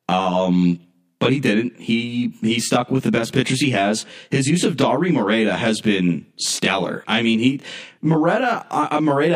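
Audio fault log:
throughout, channel delay (comb filtering): rough, slightly doubled speech; one channel lags roughly 20 ms, so the mono sum cancels evenly spaced frequencies, starting near 20 Hz.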